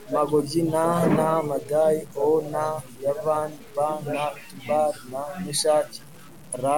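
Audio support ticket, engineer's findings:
Grainy distortion riding the speech for the whole clip, worst on quiet tails. Likely low bit depth without dither: 7-bit truncation, error roughly 30 dB below signal and tracking it. Waveform shows stair-stepping and quiet stretches dropping to silence. Spectrogram shows broadband hash only where speech is present.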